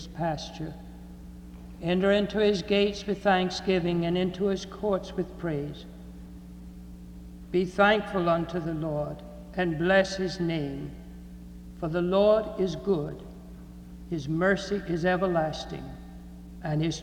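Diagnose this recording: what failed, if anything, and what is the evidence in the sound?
Nothing in the signal chain failed, with no audible evidence of a fault at any stage from capture through playback.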